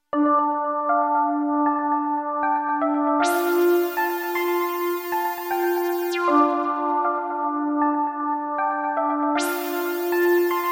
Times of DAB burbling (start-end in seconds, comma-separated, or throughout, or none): none